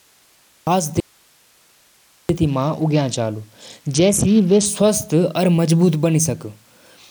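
Speech that opens on digital silence and then starts abruptly at 0.67 s, mid-sound, with no attack or fade: a cut-off start, meaning capture began late and the first part of the sound never made it into the recording. At 1.00 s the speech vanishes suddenly and only faint hiss, roughly 40 dB down, fills the next 1.29 s until the sound snaps back at 2.29 s. This audio dropout to a faint residue likely comes from the signal being lost while the downstream path stayed live, so the open input's noise floor is all that remains. From 2.46 s to 4.66 s the speech turns dull and loses its treble, with a gritty grain riding over it. This is a Bluetooth SBC bit pool drop, consistent with the bit pool falling from 28 to 8, about 72 kbps. With so few bits, the upper sub-bands are starved and the rest are coarsely quantised until the rate recovers.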